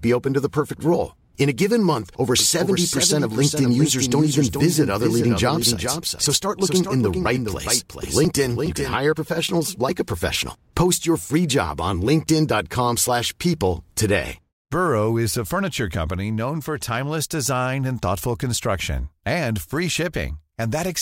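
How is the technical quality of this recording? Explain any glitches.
The recording has one clear glitch, a doubled audio track from 2.39 s to 8.93 s, starting after "a given month over" and ending before "professionals like a professional". A second copy of the signal, likely picked up again through a slower path or left out of step in an edit, is mixed in roughly 0.4 s late and around 5 dB quieter. The speech sounds overlaid by its own dry, full-band echo, with no room tail, and the copy cuts in and out abruptly.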